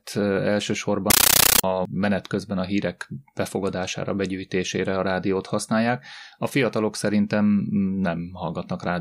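From 1.10 to 1.64 s, the speech is replaced by very loud, harsh static that chatters at a steady 31 per second, each burst about 13.3 ms long with silence between. This is a compressed stream played as audio: an AC-3 (Dolby Digital) bitstream, consistent with a 640 kbps stream, was passed through as if it were plain samples and never decoded, so each coded frame comes out as a noise burst followed by zero padding.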